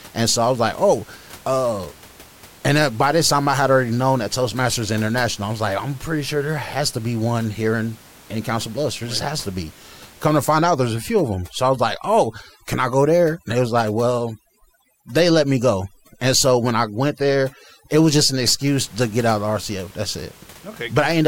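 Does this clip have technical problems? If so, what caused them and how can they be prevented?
Yes. Overdone noise removal runs from 10.57 to 18.66 s. A noise reducer set far too aggressively pushes individual frequency bands down or shuts them off whenever they sit close to its noise estimate. The room noise, about 25 dB under the speech, drops and breaks up into twinkling specks, and the quieter parts of the speech are pulled down with it. To prevent it, use gentler reduction settings and check the result by ear.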